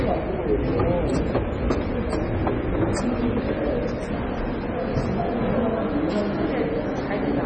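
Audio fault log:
Throughout: MP3 compression, heavy; nothing above 8.7 kHz, watery swirling texture and smeared attacks, likely from a low bitrate around 24 kbps.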